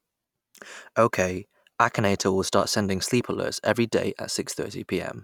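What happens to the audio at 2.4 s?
Nothing goes wrong at 2.4 s: the speech plays through intact at that moment, with no dropout, click or distortion.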